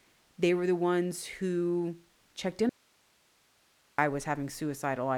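The signal was likely lost upstream while the path stayed live. After "the ones who checked" the speech drops abruptly from 2.69 to 3.98 s, leaving only faint hiss far below normal level, an audio dropout to a faint residue.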